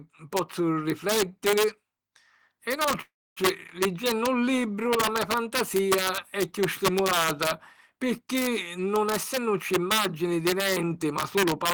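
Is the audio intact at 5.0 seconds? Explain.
No. At 5.0 seconds the speech carries integer overflow, present throughout the clip: the signal is driven about 3 dB past full scale, and the few peaks that exceed the limit, under one percent of samples, wrap to the opposite sign. Unlike clipping's flattened, fuzzy peaks, this gives violent, sharp cracks on loud syllables.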